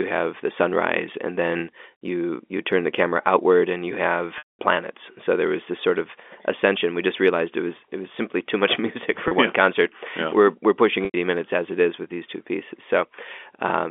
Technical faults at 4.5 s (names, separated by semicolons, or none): packet loss with pitch repetition